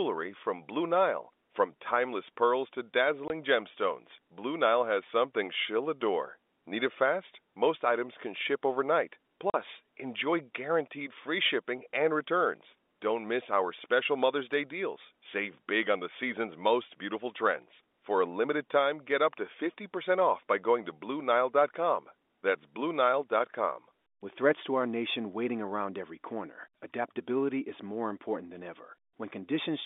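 Speech over a telephone-band line carries packet loss filled with silence: hard-edged dropouts at 3.28–3.30 s and 9.50–9.54 s, lasting 20 ms and 40 ms, which fits one and two lost 20 ms packets. Dead silence with abrupt edges, rather than smeared or repeated sound, shows that no concealment was applied.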